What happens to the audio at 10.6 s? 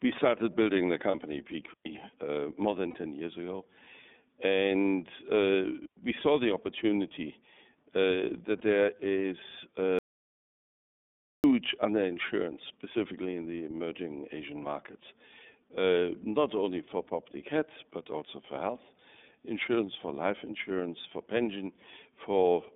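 At 10.6 s the audio drops into dead silence, with no room tone at all, from 9.99 s to 11.44 s, about 1.45 s. This audio dropout to silence most likely comes from the input being lost while the recorder kept writing zeros, so whatever was spoken then is gone.

Across this moment and the rest of the clip the speech also sounds thin, buzzy and slightly synthetic. That is iLBC codec damage. The line passes only about 200 Hz to 3.6 kHz, and each 30 ms frame is coded on its own, which fits the 13.33 kbps mode.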